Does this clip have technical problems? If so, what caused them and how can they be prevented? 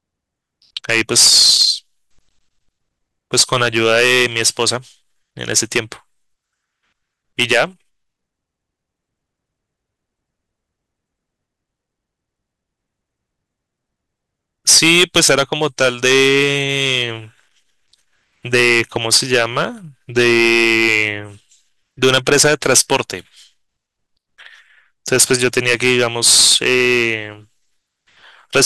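Yes. Hard clipping runs throughout the speech clip. The level is driven about 13 dB beyond what a converter or gain stage can pass, so around 2 percent of samples are cut flat, adding crackle on loud syllables. The waveform shows squared-off peaks, and the spectrogram shows broadband vertical streaks at them. To prevent it, set input gain so peaks stay several dB below full scale, or put a limiter ahead of the overloading stage.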